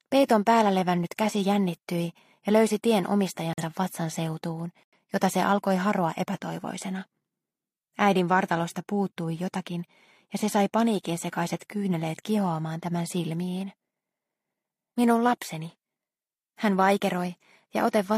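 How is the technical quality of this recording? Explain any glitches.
The recording has two short dropouts, both from corrupt frame muting. At 3.53 to 3.63 s and 4.83 to 4.98 s, damaged compressed frames were rejected by the decoder and replaced with silence. This leaves abrupt gaps of about 95 ms and 144 ms, which fit one and two lost frames, with the timing kept intact.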